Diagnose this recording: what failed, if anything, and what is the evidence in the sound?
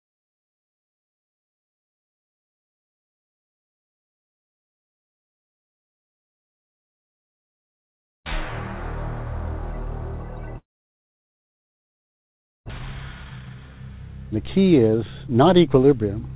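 The network stage failed at 10.58 s: the sound decays into a short fading buzz, then near-silence until 12.72 s, with about 1.6 s never returning. This is likely a long network dropout. Unlike brief packet-loss concealment, the gap runs far past any plausible smoothing.

Right after, the jitter buffer speed-up runs 12.73 to 13.67 s at 134% speed, and again 14.36 to 16.05 s at 107%. Pitch stays constant, unlike a resampling error, because whole pitch periods are trimmed, shedding roughly a third and a sixth of a second of backlog.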